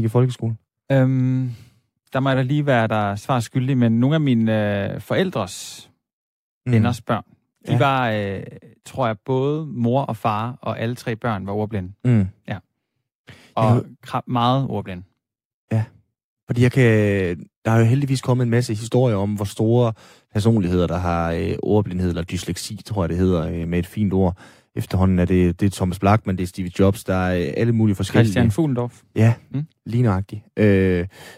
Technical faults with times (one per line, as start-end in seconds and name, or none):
none